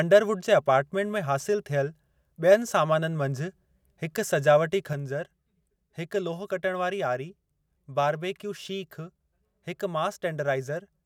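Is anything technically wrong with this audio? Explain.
Yes. From 4.93 s to the end, the speech and its background noise drop together by about 5 dB in a single step with no fade. This is a sudden gain jump, likely from a digital gain change applied between two adjacent samples without any ramp.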